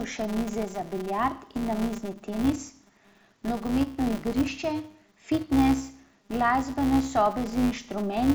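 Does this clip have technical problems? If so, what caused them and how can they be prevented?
Yes. A filter restarted on every block loses its state at each block boundary, so every block begins from silence with a small transient. Throughout the speech this produces a steady 200 Hz buzz that swells and fades with level. Carrying the filter state across blocks prevents it.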